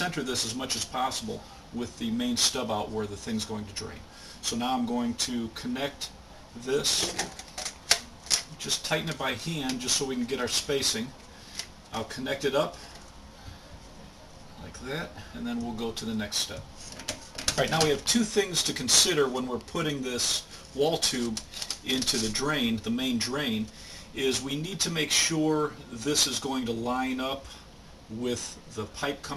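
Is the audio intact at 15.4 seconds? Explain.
Yes, the audio is intact at 15.4 seconds, with no dropout, click, distortion or other fault to be heard at that point.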